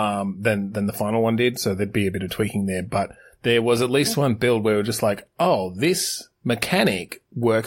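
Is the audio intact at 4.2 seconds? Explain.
Yes, at 4.2 seconds the speech runs through cleanly with no dropout, click, distortion or other technical fault.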